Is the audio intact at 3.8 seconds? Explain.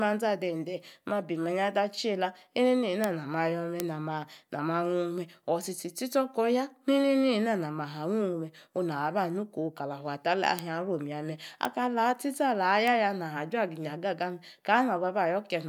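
No. At 3.80 s there is a single sharp tick, a dry click with no pitch, unrelated to the speech, that is gone at once. It is a bit error spike: one sample's value was corrupted by a flipped bit in memory or on a digital link, jumping by a power of two to a peak of about -5 dBFS before the next sample returns to the true waveform. Because it is one isolated sample, its energy spreads across the whole spectrum.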